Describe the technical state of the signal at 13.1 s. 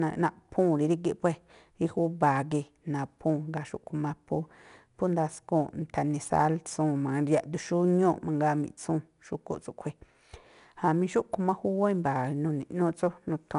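4-bit ADPCM compression is active at 13.1 s, as it is across the whole clip. Each sample is coded as a coarse step from a prediction, so the error noise tracks the speech level as a gritty hiss, roughens sharp onsets, and nothing remains above 10.6 kHz.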